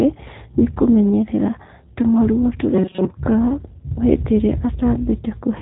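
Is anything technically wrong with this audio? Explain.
Yes, there are two problems. Throughout, the speech has the G.729 codec sound: nothing above about 3.8 kHz, plus a rough, slightly synthetic edge that fits an 8 kbit/s G.729 coder. That constant rebuilt-from-pulses texture sets it apart from plain band-limiting, which would only dull the sound.

From 2.74 to 3.10 s the speech turns into a rigid, metallic buzz at 188 Hz. It still follows the words loosely while most of the real audio is lost. The likely cause is a robotic sound from repeated short buffers, with roughly 5 ms chunks looped to fill gaps. Unlike the codec roughness, this buzz is locked to one fixed pitch and lasts only that stretch.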